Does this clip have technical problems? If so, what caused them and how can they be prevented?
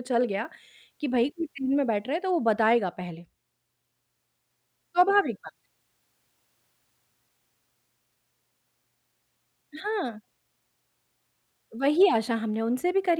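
Yes. At 0.45 s there is a repeated buffer: fresh audio failed to reach the output in time, so the device replayed its last block once more. The doubled segment is very short, which fits a 10 ms buffer, and it is heard as a brief click or buzz with a hard join. Essentially nothing is skipped. Enlarging the output buffer and giving the audio thread higher scheduling priority would prevent such underruns.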